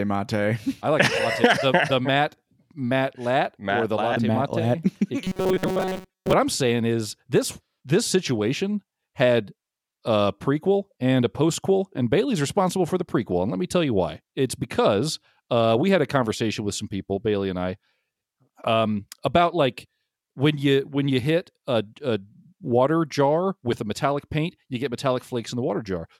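Robotic sound from repeated short buffers runs from 5.24 to 6.33 s. The sound hardens into a rigid metallic buzz at 188 Hz, likely because new audio arrived too seldom and a slice of about 5 ms was looped over most of that stretch while the real audio was skipped.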